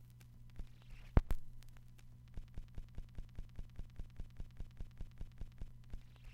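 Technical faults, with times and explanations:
2.44–5.71 s, broken-record loop: a 0.20 s fragment repeats exactly, back to back, 16 times, and the sound that should have played there is lost. A stalled player, encoder or stream likely kept resending its last fragment. The waveform and spectrogram show one identical block tiled every 0.20 s.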